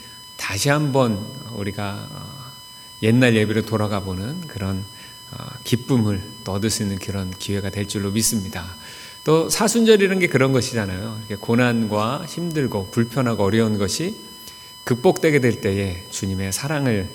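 There's USB whine running the whole way through: a fixed 1 kHz tone from the bus's 1 ms frames, strongest at the 5 kHz harmonic, sitting roughly 20 dB under the audio.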